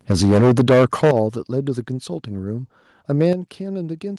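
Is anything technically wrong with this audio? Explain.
Yes. From 0.1 to 1.11 s the sound has a harsh, crackling, flattened edge on its loudest parts, with peaks pushed about 12 dB past the converter's limit and roughly a fifth of the samples squared off. A shorter, milder burst of the same distortion comes at 3.2 to 3.31 s, about 2 dB over with only a few percent of samples affected. This is microphone overload, likely from the input gain being set too high so that the converter cut off the waveform tops.

The level also drops abruptly in three steps, sound and background together: by about 3 dB at 0.12 s, about 11 dB at 1.11 s, and about 7 dB at 3.33 s. Each step lands during or just after a clipped stretch, the pattern of the microphone volume likely being stepped down automatically by the call software reacting to the overload. The largest step coincides with the end of the first clipped section.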